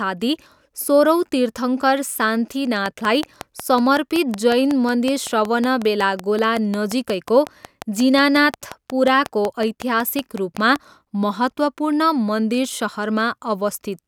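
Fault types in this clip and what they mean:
Train of clicks: from 2.86 to 10.77 s, about forty near-identical ticks arrive at a steady 5.44 per second, peaking about 10 dB above the speech and continuing through pauses. Their even pacing sets them apart from random crackle and points to likely electrical interference or a faltering interface.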